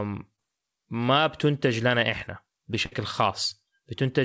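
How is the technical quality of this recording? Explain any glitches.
The recording has two packet-loss glitches. The speech also carries call-codec coloration with nothing above 8 kHz, which fits G.722 at 64 kbps.

Short concealed packet loss, 0.36 to 0.40 s: about 20 ms never arrived in time, so the receiver extended the preceding sound, heard as a brief smear or wobble.

Burst of packet loss, 2.86 to 2.93 s: about 60 ms went missing. The decoder held and faded the last sound into a short buzz or hiss, then resumed further on.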